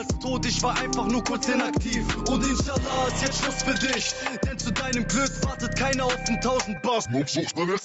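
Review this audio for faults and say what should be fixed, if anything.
Gain pumping runs through the whole clip. The gain swings by roughly 10 dB, so loud and quiet passages sit unnaturally close together and the result sounds squashed. The likely cause is input gain set far too high, with a fast limiter or compressor clamping each peak and releasing between them. The audio tops out near 8 kHz, consistent with the call chain's band limit. To prevent it, lower the microphone input gain so the dynamics stage stays idle on normal peaks.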